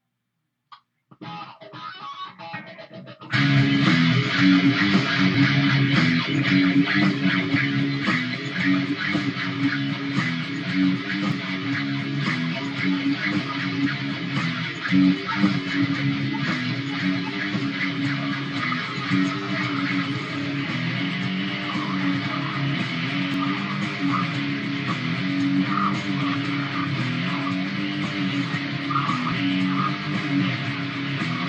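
Overlap between stream segments occurs at 5.34, 11.32, 23.34 and 29.32 s. Overlapping time stamps at segment joins, which fit 6-second segments, made the player trim 30 to 40 ms of sound that was never duplicated, so the waveform jumps and the sound skips briefly.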